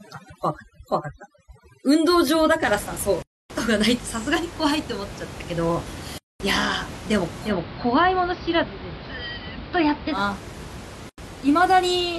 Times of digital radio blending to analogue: 7.42-10.22

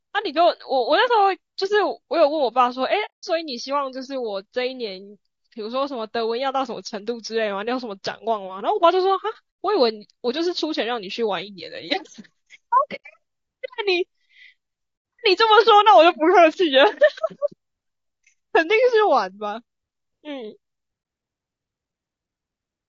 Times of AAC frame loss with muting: 3.05-3.24, 9.49-9.59, 12.95-13.03, 14.96-15.04, 21.02-21.05

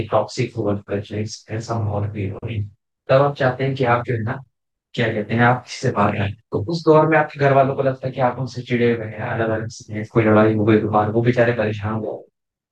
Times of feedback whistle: none

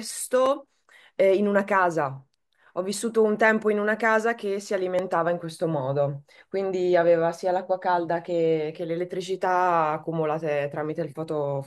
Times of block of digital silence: 0.46, 4.99

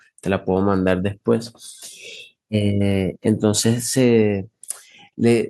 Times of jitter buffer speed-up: none

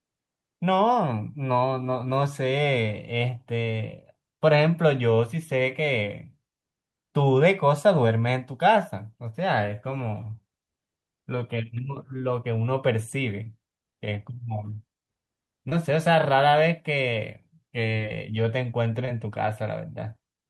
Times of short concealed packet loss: 13.43-13.47, 15.69-15.73, 17.97-18.01, 19.05-19.09

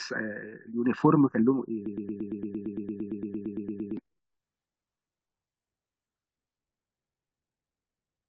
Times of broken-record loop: 1.86-3.97

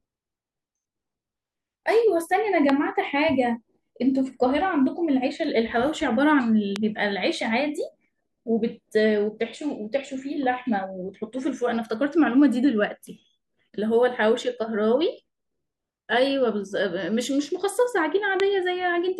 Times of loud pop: 2.69-2.71, 6.76-6.78, 18.40-18.42

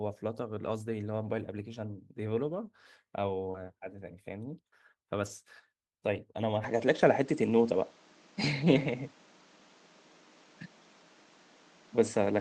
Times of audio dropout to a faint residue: none

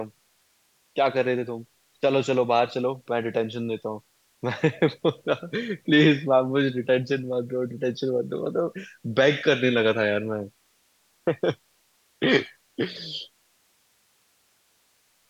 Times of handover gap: none

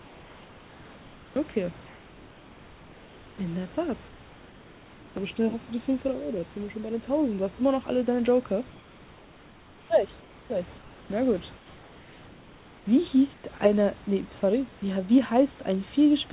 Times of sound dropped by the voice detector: 13.58

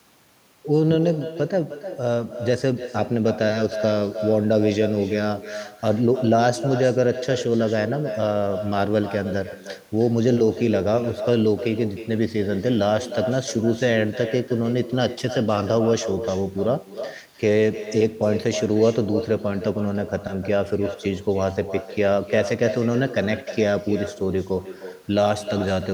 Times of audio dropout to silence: none

